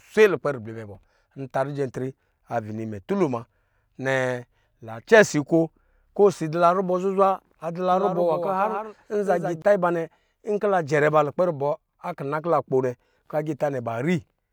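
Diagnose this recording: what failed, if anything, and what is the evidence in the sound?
A doubled audio track spans 7.92 to 9.62 s, after "nwa zuzwa": a dry, full-band copy trails roughly 150 ms, about 5 dB down, with abrupt edges. Spectrogram and waveform show each onset repeated. The likely cause is a slower second capture path at the driver stage.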